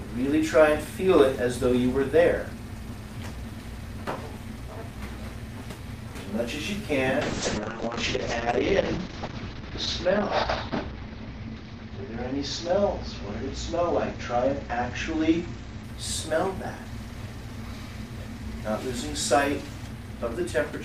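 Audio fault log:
7.23–15.89 s, call bitrate drop: the encoder was starved of bits after the call's bandwidth estimate fell. The sound turns coarse and watery, and the top end collapses from around 20 kHz to an 8 kHz ceiling, which fits a rate cut from roughly 48 kbps to about 7 kbps. Coarser quantisation produces the roughness, and the narrowed band produces the muffling. The worst stretch lasts about 2.7 s before the bitrate recovers and full bandwidth returns.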